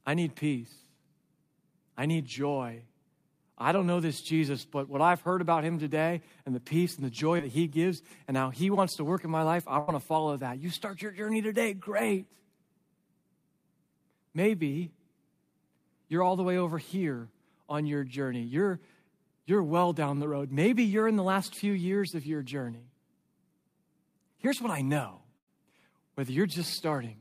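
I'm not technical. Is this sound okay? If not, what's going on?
No, there are a few small dropouts in this speech recording. At 7.37 s, just after "peace and the joy", there's a short concealed packet loss. About 20 ms of audio went missing, and the receiving end covered it by stretching the last sound, so you hear a quick smear or wobble.

There are also two longer gaps, each a burst of packet loss. At 9.79 s, between "in my life I" and "to follow that", roughly 80 ms vanished. At 25.37 s, after "what I know", about 100 ms vanished. Both times the last sound gets held as a fading buzz or hiss, then the speech jumps ahead with a bit skipped.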